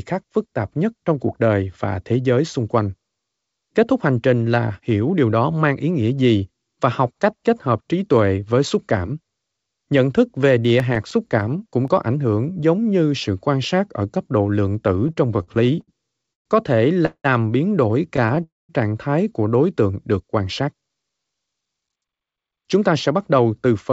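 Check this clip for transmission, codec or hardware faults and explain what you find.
Four kinds of fault are audible in this speech, which is band-limited to about 8 kHz, consistent with a 64 kbps G.722 call codec.

CD scratch ticks, 10.49 to 12.03 s, just before "hưởng giống như sự": a disc blemish beat the error correction on each revolution, leaving 11 brief ticks, none longer than about 5 ms.

Repeated stalls (stutter), 15.08 to 16.47 s: late packets emptied the jitter buffer 13 times, and the receiver stretched sound over 336 ms, the longest gap 122 ms, so delivery drags. Again at 18.16 to 18.43 s, after "biến đổi": four short stalls, none over 14 ms.

Call audio freeze, 17.06 to 17.26 s and 18.43 to 18.71 s, the second just before "trạng thái của đối": the sound hangs, fades, then resumes where it stopped, likely from held-up packets draining the jitter buffer. The pauses run 188 ms, with 70 ms near-silent, and 255 ms, with 190 ms near-silent.

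Jitter buffer speed-up, 20.61 s to the end: the buffer trimmed repeated pitch-period slices, roughly 0.3 s in total, so speech runs about 9% fast at unchanged pitch and sounds hurried.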